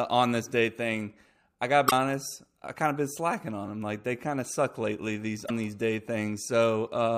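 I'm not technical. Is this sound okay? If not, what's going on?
No. There are two short glitches in the speech, at about 1.87 to 1.92 s and 5.45 to 5.50 s. Both come from damaged data in a compressed stream. Part of the file is broken there. The player misreads it and briefly produces a chirp or blip.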